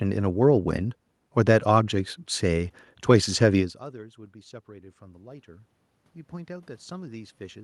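Speech with room noise in which the level falls around 3.5 s as the talker moves back, about 24 dB down at the microphone. From 3.92 to 5.75 s automatic gain rising follows: the gain control slowly adds about 3 dB, swelling voice and room noise together.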